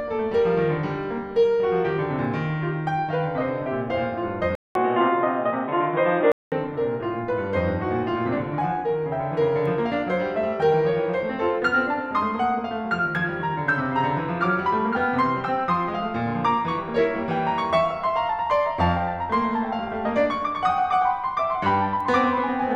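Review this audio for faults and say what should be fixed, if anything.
The input likely switched to a poorer device from 4.55 to 6.52 s. After a 200 ms silence, the music loses everything above 3.8 kHz and turns dull and boxy. It shifts level by around 5 dB and picks up a faint new background noise, then clears again. To prevent this, lock recording to the intended microphone and disable automatic device switching, including headset call profiles.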